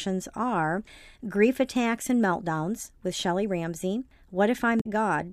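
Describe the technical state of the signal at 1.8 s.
At 1.8 s the speech signal is intact, with no dropout, distortion, glitch or other audible fault at that moment.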